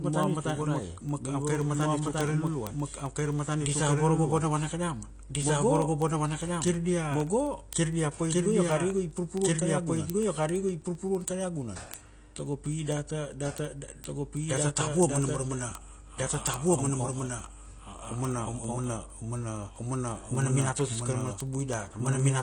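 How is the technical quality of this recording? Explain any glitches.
The recording has three distinct problems: a second copy of the speech running behind the first, plainly audible lossy-codec damage, and a steady train of clicks.

Doubled audio track: Throughout, the speech is joined by a full-band copy about as loud as the original, trailing by roughly a second and a half, with no decay or room colour. The likely cause is a slower second capture path or a misaligned edit. A spectrogram shows every syllable pattern repeated, shifted right.

AAC compression: Across the whole clip the speech sounds dull, smeared and warbly, with fizzy sibilants. This likely comes from AAC-LC at a low bitrate, around 32 kbps, which coarsely quantises frequency lines. A spectrogram shows a hard ceiling near 9.8 kHz.

Word clock ticks: From 0.10 s to 22.39 s, sharp ticks of uneven strength repeat about every 70 ms. 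A receiving device on its own unlocked clock, a few hundred ppm off the sender, misreads samples and drops or repeats one each slip. The waveform shows single-sample spikes, and the spectrogram shows thin vertical lines.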